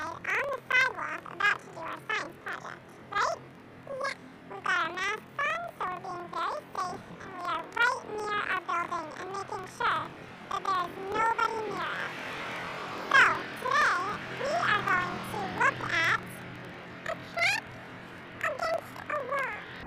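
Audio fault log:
Throughout: planar audio read as interleaved. The sound sits an octave high, 12 semitones up, with a steady flutter at about 21.5 Hz. Each 46.44 ms block, which fits a 2048-sample layout, holds all left samples and then all right, but is read as alternating pairs, so each block plays twice at double speed. Unlike a plain sample-rate error, the overall pace and timing stay correct, and the flutter marks the block boundaries.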